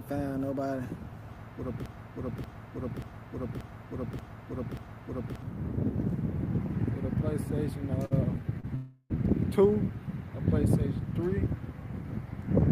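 From 1.86 to 5.42 s, a broken-record loop repeats a 0.58 s fragment six times, likely from a stalled stream; the waveform shows identical blocks back to back.

Short stalls from late packets stretch the sound by 55 ms at 8.05 s and 33 ms at 8.60 s, leaving smeared, flattened bands on a spectrogram.

From 8.75 to 9.12 s, a call audio freeze holds the last sound as a fading buzz or hiss for 0.35 s, likely from delayed packets, visible as a decaying smear.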